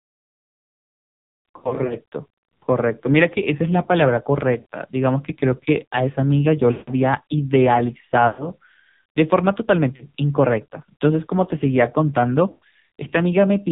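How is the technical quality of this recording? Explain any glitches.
Quality is pretty rough: the whole clip has that band-limited, buzzy phone sound, and there are six short dropouts scattered through it.

AMR narrowband mobile codec, throughout: everything above 4 kHz is gone, and the heavy synthetic buzz points to a very low bitrate mode, around 5.9 kbps.

Lost AMR speech frames at 1.58 to 1.97 s, 4.60 to 4.65 s, 6.72 to 6.91 s, 8.28 to 8.47 s, 9.96 to 10.04 s and 12.50 to 12.64 s: frames got corrupted on the radio link, so the decoder stretched the last good sound with fading gain. You hear brief warbles or smeared, dying-off bits between 40 and 160 ms long. The first one is scattered over about 320 ms.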